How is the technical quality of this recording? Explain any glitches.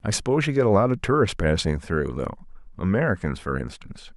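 Listening through the recording, nothing stood out as a glitch or technical problem.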